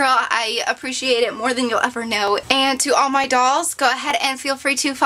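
Dropped samples, likely the cause of four isolated clicks at 0.84 s, 2.28 s, 3.24 s and 4.11 s. Each is a single sharp tick, seen as a thin vertical line across the spectrum. At each point a sliver of the stream, well under a millisecond, goes missing, so the waveform jumps straight from one value to a later one. The gap is far too brief to remove any audible sound; only the sudden step is heard.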